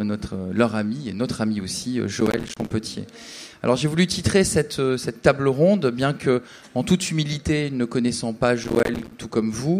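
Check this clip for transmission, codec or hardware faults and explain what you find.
Two bursts of processor overload crackle, from 2.21 to 2.71 s and from 8.64 to 9.13 s. Each is about half a second of gritty, tearing crackle riding on the sound, and it stops when the load passes. The processor fell behind its deadlines for short audio buffers, each only a few milliseconds long, and dozens were missed over that stretch. Every missed buffer left a tiny hard-edged gap of silence, and together these gaps produce the crackle.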